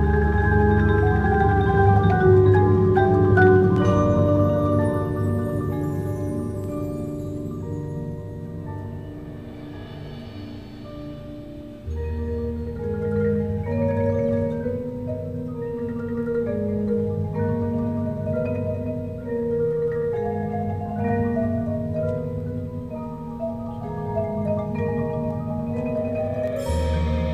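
No audible faults anywhere in the recording.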